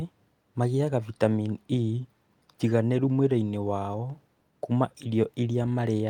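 Listening to the speech recording, nothing stood out as a technical fault anywhere in it.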